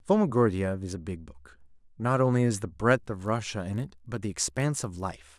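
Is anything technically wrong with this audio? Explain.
Yes. From 2.9 s to the end at 5.38 s, the speech carries a resampler restarted on every block. The conversion from 48 kHz to 24 kHz was done on 20 ms blocks, each treated in isolation. At every block edge the filter lacked the real neighbouring samples, so it left a small error there. Those errors repeat at 50 Hz. The result is a low buzz riding on the speech, heard only while sound is present.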